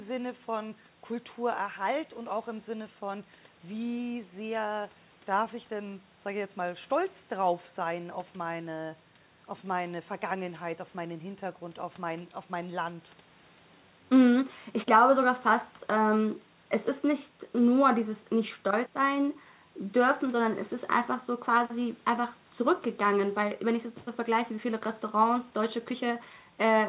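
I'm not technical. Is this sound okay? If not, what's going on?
Yes, this sounds fine; there's nothing wrong here.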